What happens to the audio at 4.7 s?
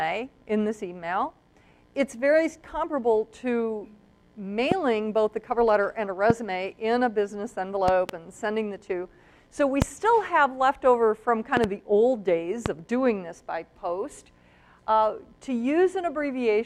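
A sudden voltage pulse, likely from a plug, switch or static discharge, enters the chain at 4.72 to 4.74 s: a single loud pop, roughly 15 dB above the sound, which continues underneath.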